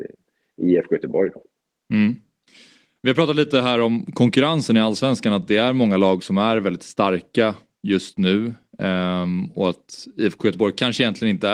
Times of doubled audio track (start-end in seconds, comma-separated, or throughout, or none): none